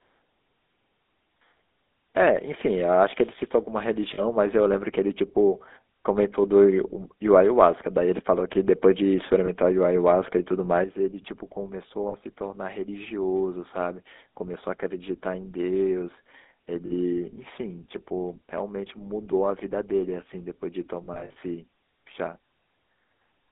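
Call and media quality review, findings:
GSM full-rate codec, throughout. Buzzy, gravelly texture on speech, plainly audible; band limited to roughly 250 Hz to 3.7 kHz, which fits 13 kbps GSM. Vocal tract model driven by decimated pulse excitation; the coarse excitation causes the roughness.

Lost GSM frames at 1.48–1.52 s, 4.14–4.21 s, 9.46–9.49 s, 12.08–12.15 s, 16.86–16.92 s, and 21.04–21.36 s. The first five are short metallic rings of 20–60 ms. The last is about 180 ms scattered over 320 ms, longest run around 70 ms. The decoder repeats the last good frame.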